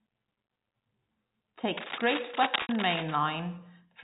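A worn cable or connector shifting in its contact is the likely cause of the cable scratch noise from 1.77 to 3.16 s. Rapid resistance changes put dense, uneven bursts of rustling, scratching noise over the speech, nearly as loud as the speech itself.

Inside that stretch, from 2.62 to 2.69 s, a 70 ms gap in the stream, which fits seven 10 ms packets, brings packet loss with pitch repetition. The receiver repeats the last pitch cycle and fades it, giving a buzzy held tone before speech cross-fades back.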